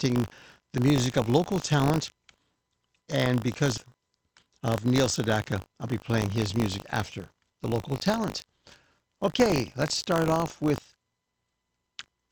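Buffer tearing runs throughout: the playback ring buffer's writer and reader have slipped and cross every period, splicing a small slice of audio from about 40 ms earlier into each buffer. The hard joins form a 50 Hz rattle, consistent with 20 ms periods, present whenever sound plays.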